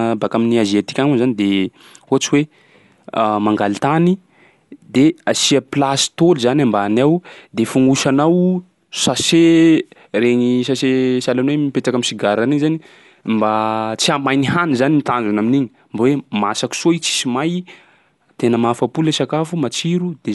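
Throughout the speech, the sound is dull, with a rough, fluttering noise around voiced tones, likely from Dolby Digital compression at a low bitrate near 64 kbps. Starved frequency lines get dither noise instead of detail, and a spectrogram shows a hard ceiling at 11.4 kHz.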